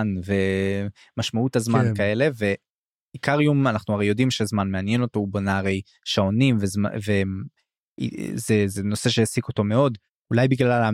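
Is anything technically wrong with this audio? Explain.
No, nothing technically wrong can be heard in this speech recording. There is no fault to point to at any moment in the clip.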